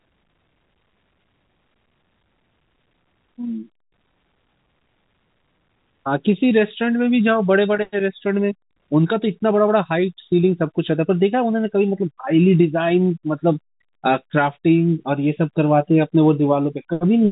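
Nothing stood out on listening to this speech recording, which comes through the narrow band of a fixed-line telephone link.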